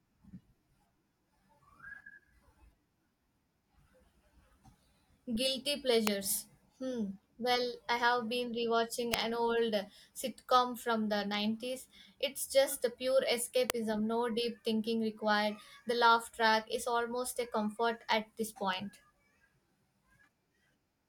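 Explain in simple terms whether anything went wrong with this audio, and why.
Three sharp snaps cut across the speech, at 6.07 s, at 9.14 s between "I have been rewatching" and "an old sitcom from", and at 13.70 s between "just the pure" and "no deep thinking required". These are electrical switching spikes, likely from a nearby switch or motor arcing briefly, which the audio line picked up.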